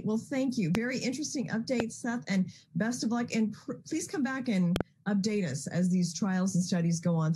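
A sharp loud pop cuts in at 0.75 to 0.77 s, jumping roughly 20 dB above the surrounding sound. A slightly softer one, about 15 dB up, follows at 1.80 to 1.82 s. At 4.76 to 4.83 s comes a double pop, two quick thumps, again around 20 dB over the signal. The sound carries on beneath each. The likely cause is a sudden voltage step from a plug, switch, static discharge or driver glitch, shaped by the following circuitry into a brief pulse.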